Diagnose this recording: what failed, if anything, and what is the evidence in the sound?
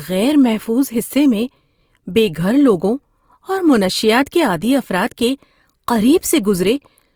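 Codec stage: throughout, the speech sounds grainy and rough, with noise-filled highs instead of MP3-style swirling holes. This is likely Opus compression in CELT mode, near 24 kbps.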